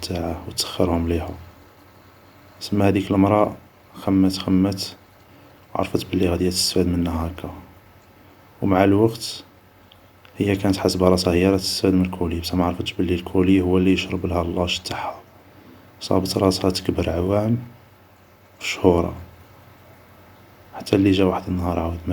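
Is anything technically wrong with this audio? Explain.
No, the speech signal is technically sound throughout, with nothing in the recording or playback chain audibly going wrong.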